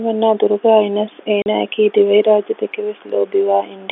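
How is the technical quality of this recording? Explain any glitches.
There's one glitch, heard over telephone-band speech. At 1.42 to 1.46 s there's packet loss filled with silence: a 40 ms hole, which fits two lost 20 ms packets, muted outright with hard edges.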